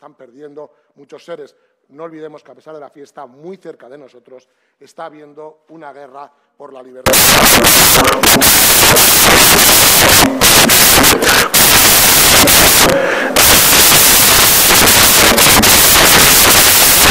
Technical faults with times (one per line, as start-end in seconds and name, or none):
7.06-17.11 samples built from the wrong bytes